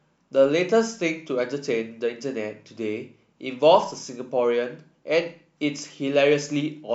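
No faults are audible anywhere in this speech recording.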